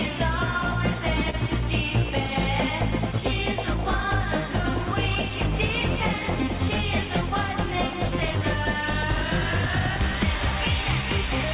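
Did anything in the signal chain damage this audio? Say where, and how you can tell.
Yes. At the call-processing or capture stage, the audio was likely picked up a second time by a slower path, giving a doubled audio track. A full-band copy sits roughly 200 ms behind the original and about 10 dB quieter, running the whole length of the clip. It has no decay tail or room colour, so it sounds like a clean slapback rather than a reflection. That points to a duplicated signal, not acoustics.

At the network and buffer stage there is clock drift between sender and receiver, present throughout. The sender's clock runs about 1% slow relative to the receiver's, so the jitter buffer keeps draining. The receiver has to keep patching over that shortfall. The drift can't be heard as a steady pitch change. It shows up through the corrections and the stall described below.

In the jitter buffer there is a short stall from a late packet, at 1.30 to 1.35 s. 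A packet missed its slot, the buffer ran dry, and the receiver held the last sound for 30 ms until the packet arrived. Playback then resumed from the same point, with the delay 30 ms longer. Nothing is lost, but one sound lingers slightly too long, with a faint buzz or dip.

The same buffer then makes repeated timing corrections from 2.70 to 11.03 s, all stretching the audio. Playback runs at 99% speed, adding roughly 100 ms over that stretch in small inserted pieces at uneven spacing. Each insertion is slight. All of this rides on the G.711 A-law call path, which cuts everything above 4 kHz.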